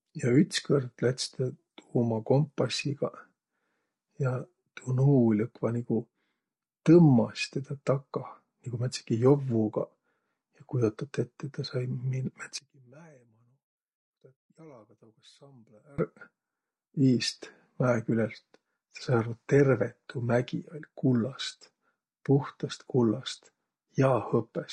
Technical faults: low-delay AAC compression; one channel inverted

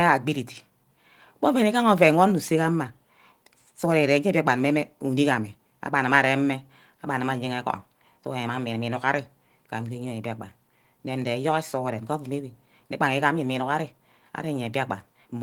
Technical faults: none

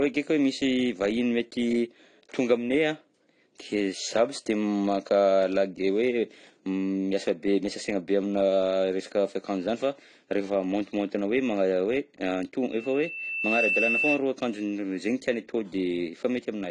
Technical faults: AAC compression; loudspeaker feedback squeal

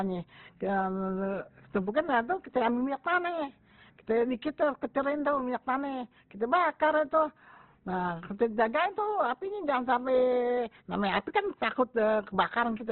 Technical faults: Opus compression

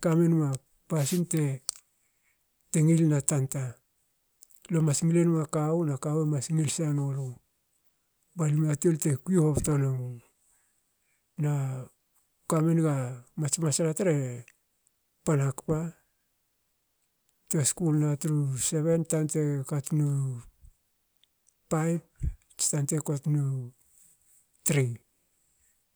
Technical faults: wireless microphone noise hit

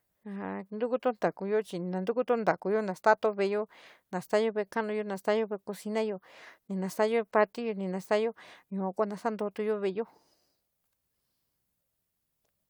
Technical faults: none

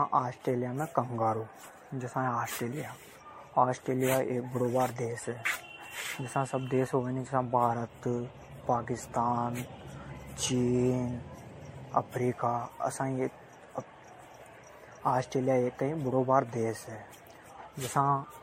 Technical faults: generation loss

